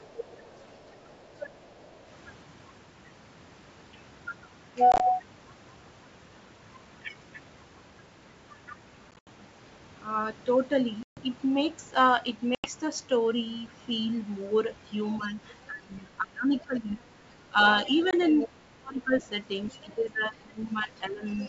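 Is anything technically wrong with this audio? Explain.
Yes, several faults are audible in this speech, carried over G.722 wideband coding at 64 kbit/s.

Other side's voice leaking through appears at 0.02–1.97 s, 15.12–15.28 s, 17.85–18.48 s, 19.69–19.95 s and 21.34–21.48 s. A second voice sits roughly 15 to 30 dB below the talker, likely loudspeaker echo the canceller failed to remove.

Packet loss on an ADPCM call occurs at 4.92–5.01 s, 9.11–9.28 s, 11.03–11.21 s, 12.55–12.68 s and 18.11–18.13 s. Hard silent gaps of 20–140 ms are followed by slightly distorted speech while the decoder's predictor resynchronises.

Speech suppressed in double talk happens at 15.18–19.16 s and 19.71–21.24 s. The talker dips by up to about 25 dB and 15 dB respectively, likely because the echo canceller attenuated everything during simultaneous talk.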